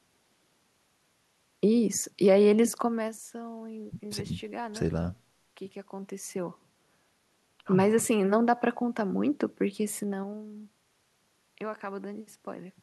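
Gain changes in this speech recording are applied in unsmoothed 3 dB steps, causing zipper noise: ticking clicks during a roughly 15 dB drop at 2.73–3.16 s, a slower rise at 6.06–7.51 s (around three steps per second), and another drop at 9.98–10.41 s.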